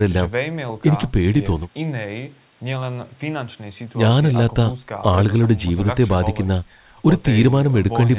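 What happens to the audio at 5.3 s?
At 5.3 s the speech runs on intact, with no dropout, glitch or distortion, only the narrow telephone-band sound of the call codec, which carries nothing above 4 kHz.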